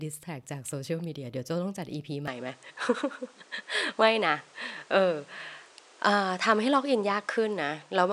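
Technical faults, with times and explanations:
2.28–8.12 s, input switched to a poorer device: speech turns dull with nothing above 10.5 kHz, shifts about 5 dB in level, and gains faint new background noise, likely from switching to a narrower-band microphone.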